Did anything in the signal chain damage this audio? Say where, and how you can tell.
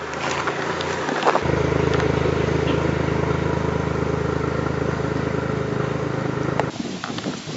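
No, nothing in the chain.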